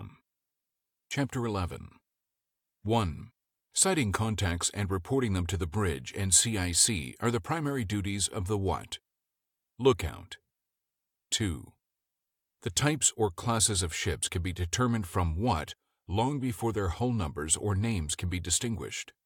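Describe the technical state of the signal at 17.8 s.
At 17.8 s the speech signal is intact, with no audible fault at that moment.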